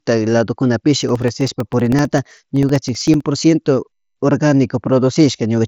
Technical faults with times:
1.03-3.20 periodic USB or driver dropouts

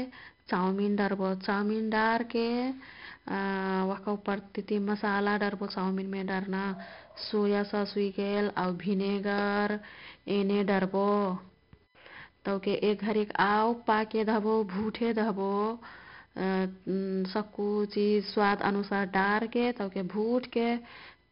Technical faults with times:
0.00-21.31 USB whine
0.00-21.31 4-bit ADPCM compression

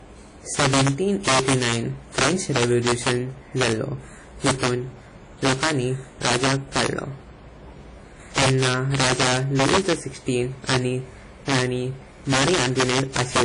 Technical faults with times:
0.00-13.45 integer overflow
0.00-13.45 WMA compression

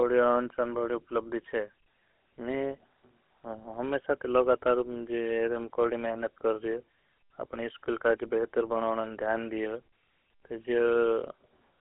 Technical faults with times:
0.00-11.80 GSM full-rate codec

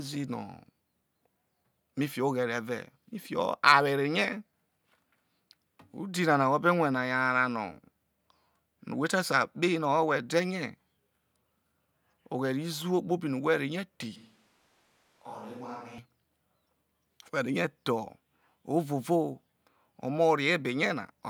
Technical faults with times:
14.16-15.98 switch to a distant microphone

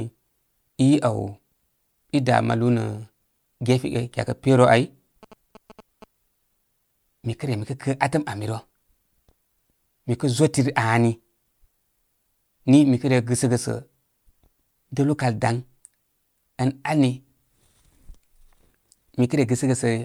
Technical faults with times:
5.23-6.04 GSM signalling bursts

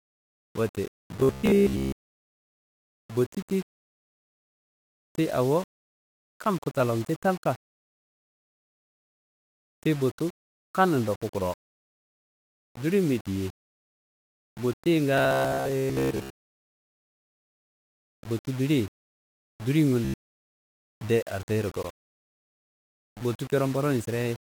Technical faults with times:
0.00-24.53 low bit depth without dither
1.20-2.27 robotic sound from repeated short buffers
15.18-18.07 robotic sound from repeated short buffers
20.05-20.38 robotic sound from repeated short buffers

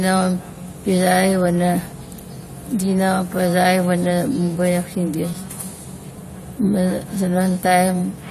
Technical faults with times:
5.34 underrun with held sample

